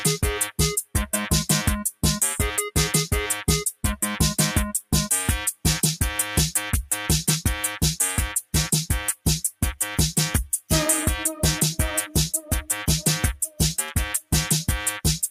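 Sound cut by the noise suppressor, from 13.45 to 13.6 s: for roughly 150 ms near the end of the clip, the suppressor misjudged part of the wanted audio as background noise and applied its attenuation to it. The level sinks by as much as about 9 dB at the deepest point, so the sound briefly drops back before returning to its previous level once the suppressor releases.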